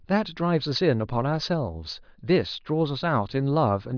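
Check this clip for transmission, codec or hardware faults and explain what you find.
The speech signal shows no audible faults at any point.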